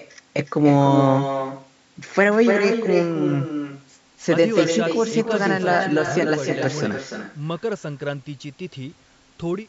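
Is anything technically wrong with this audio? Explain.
Yes. Throughout the speech there's echo with no canceller. The far end is playing the call out loud, its microphone catches that playback, and nothing strips it out, so the voice returns after the network round trip, roughly a third of a second late. That copy sits only about 7 dB below the direct speech, so every phrase is trailed by a thinner ghost. The band-limiting to 8 kHz from the call's microphone processing is just normal.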